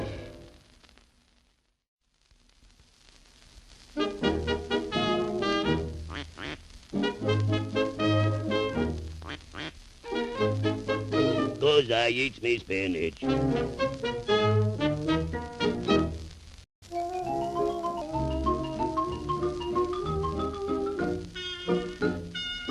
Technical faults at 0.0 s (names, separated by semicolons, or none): none